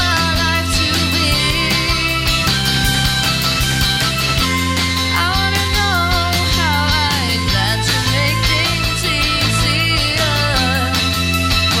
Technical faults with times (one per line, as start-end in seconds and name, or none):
0.11-11.71 word clock ticks